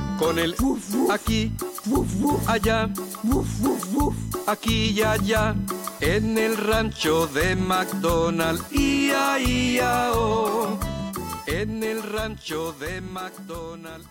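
There's USB whine running under the audio for the whole clip: a fixed-pitch tone at 1 kHz with its strongest component at 2 kHz, sitting roughly 35 dB below the signal. That's the bus's 1 ms frame rhythm pulling current and leaking in through power or ground.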